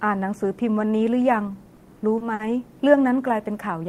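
From 1.65 s to 2.41 s the speech falls into repeated stalls (stutter): five short hitches in which the receiver's jitter buffer ran dry because packets arrived late, so it held the last sound going until more arrived. The fills add up to about 120 ms, none longer than 50 ms, covering 16% of that stretch. Unlike packet loss, nothing is cut out. The speech simply drags and catches, arriving late rather than incomplete.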